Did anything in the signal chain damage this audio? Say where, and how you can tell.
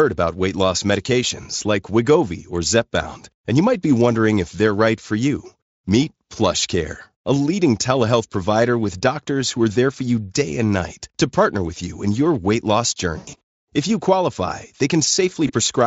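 Yes. The network caused VoIP packet loss concealed by the speech codec at 13.17–13.41 s, after "in your weight loss", and at 15.47–15.52 s. The decoder extrapolates the missing audio into a buzzy tone or coloured noise that fades.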